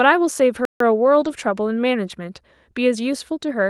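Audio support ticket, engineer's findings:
Playback stall, 0.65 to 0.80 s: speech cuts to silence mid-flow for about 150 ms, then resumes. Likely cause is the player starving, either a buffer underrun or a blocked audio thread, with output held silent until data flowed again.

Lost packet rebuilt from error correction, 1.21 to 1.31 s: no dropout, but a short stretch of speech sounds rougher and noisier, about 60 ms of rebuilt audio spread across the span, which fits a few separate lost packets. The Opus decoder filled each one from the low-bitrate copy carried in the following packet, so the signal stays continuous and only the quality drops.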